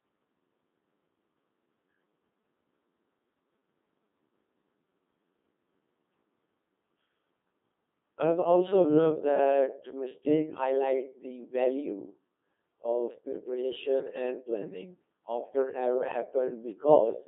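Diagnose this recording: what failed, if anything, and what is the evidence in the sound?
Codec fault: a Codec 2 vocoder throughout. Speech sounds buzzy and robotic, rebuilt from sine waves, with nothing above 3.8 kHz. That fits a 2.4 kbit/s mode.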